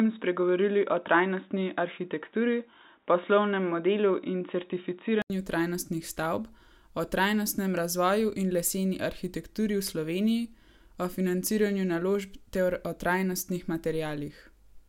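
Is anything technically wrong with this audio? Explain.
Yes. From the start to 5.30 s the speech is band-limited, with nothing above 3.8 kHz. It sounds dull and boxy, and there is a faint noise floor of its own, roughly 55 dB down. At 5.30 s there is an 80 ms silence, after which the full bandwidth returns and the level shifts by about 5 dB. This is likely an input switched to a poorer device. The capture path was probably moved between a narrowband input, such as a headset call profile, and a better microphone.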